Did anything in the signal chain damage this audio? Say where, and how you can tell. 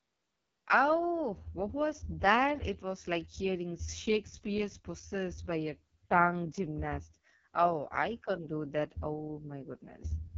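Yes: the damage comes from the codec stage, the AMR wideband (HD Voice) codec, and it runs through the whole speech clip. The speech sounds rough and raspy, which fits the lowest 6.6 kbit/s mode, where the pulse-driven vocal tract model has too few bits to follow the voice. Nothing sounds above about 7.1 kHz, and the top band has a hissy, noise-filled quality. A plain low-pass filter would leave the voice smooth, and narrowband AMR would stop near 3.4 kHz.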